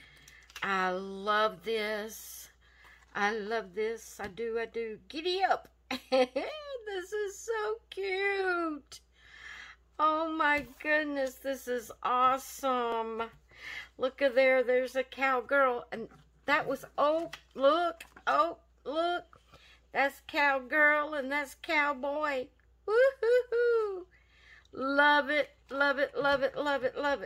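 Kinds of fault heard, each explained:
Dropped buffer (overrun): at 12.92 s the audio jumps ahead by a few milliseconds with no gap, likely because samples were overwritten before being read. The waveform shows an abrupt splice discontinuity, and the spectrogram shows a thin broadband vertical line.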